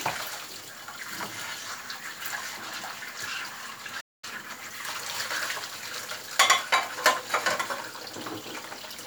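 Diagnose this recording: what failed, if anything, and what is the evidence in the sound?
The playback stage stalled, most likely because the player ran short of data or its output thread was blocked. At 4.00 s the sound stops abruptly and the output stays silent for about 222 ms, a playback stall, before sound returns at 4.24 s.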